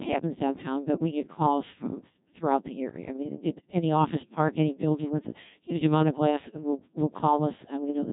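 From start to finish the speech has been through the Codec 2 vocoder, which keeps only pitch, voicing, energy and a coarse spectral envelope and then rebuilds the voice from sine waves. The original waveform is gone, and the heavy damage points to a very low rate, around 1.6 kbit/s. The result sounds robotic and buzzy, with a smeared, synthetic tone, and nothing remains above 3.8 kHz, so the top end is dull and closed-in.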